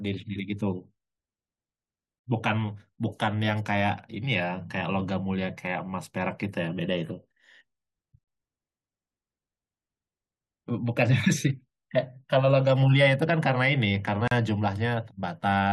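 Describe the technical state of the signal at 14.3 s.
At 14.28 to 14.31 s the speech breaks for about 37 ms: a gap at a join of encoded pieces. The audio was encoded in separate segments, here joined every 6 s, and neither the encoder's start-up delay nor the padding of the previous segment's final frame was trimmed, so that silence stays in. Unlike a dropout, no speech is missing: it resumes exactly where it stopped, with the gap's edges smeared by the codec.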